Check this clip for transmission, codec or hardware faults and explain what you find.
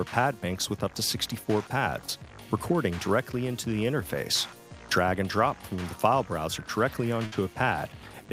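One fault stands out, a burst of packet loss near the end.

From 7.25 to 7.34 s the sound stops moving forward: the last fragment hangs on for about 64 ms, growing quieter, and then the audio picks up again with roughly 60 ms of material simply gone. Several consecutive packets, or one long one, never arrived in time, so the receiver stretched and faded the last good audio to cover the hole before jumping ahead to where the stream resumed.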